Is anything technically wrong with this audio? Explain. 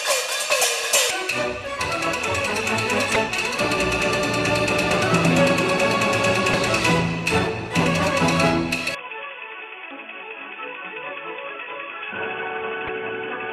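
Yes. Two kinds of fault are audible.

Damaged data in a compressed stream appears at 1.07–1.11 s, 3.15 s, 6.51–6.54 s, 9.88–9.91 s and 12.86–12.89 s. Each is a brief chirp or blip. Corrupt bytes make the decoder misread those frames and resync at the next header. A dropout would instead leave a plain gap.

From 8.95 s to the end the sound turns dull and boxy with no gap at the change. Nothing remains above 3.4 kHz, the level falls by roughly 10 dB, and a new noise floor sits roughly 45 dB down. The likely cause is an input switched to a poorer device, such as a headset's call profile. The sudden, lasting shift in tone, level and noise together sets this apart from a simple low-pass filter.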